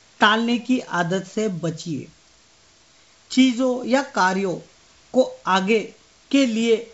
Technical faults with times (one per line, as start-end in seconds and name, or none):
none